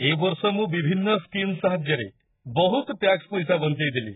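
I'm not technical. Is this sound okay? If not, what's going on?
No, the speech has heavy damage from start to finish, and the likely cause is AAC compression squeezed very hard. Nothing comes through above about 3.8 kHz, so the voice sounds dull and muffled, like it is coming through a wall. The compressor throws away detail it judges least audible, which at this level leaves a smeared, watery texture, noticeable on hissy sounds like s and sh.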